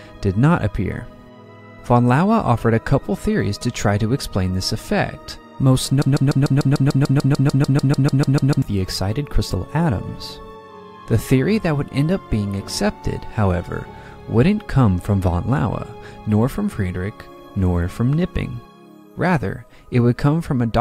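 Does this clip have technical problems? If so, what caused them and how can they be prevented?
Yes. Between 6.02 and 8.62 s the playback chain likely stalled and kept resending the last fragment it held, producing a broken-record loop. A piece about 0.15 s long repeats exactly, back to back, 18 times, so the audio stutters mechanically for roughly two and a half seconds, and whatever should have played in that span is missing. Prevent it with adequate buffering, stall detection and timeouts that fall back to silence instead of replaying the last fragment.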